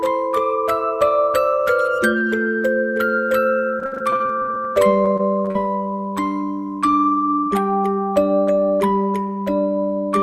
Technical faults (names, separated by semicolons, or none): repeated packet loss (robotic sound)